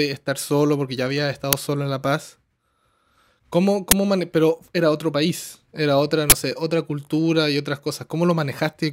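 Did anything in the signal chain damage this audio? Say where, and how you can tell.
Yes. At the driver or buffer stage, uninitialised buffers played before audio was written, so leftover memory became loud digital noise bursts at 1.53 s, 3.91 s and 6.30–6.32 s, matching 256-, 512- and 1024-sample blocks.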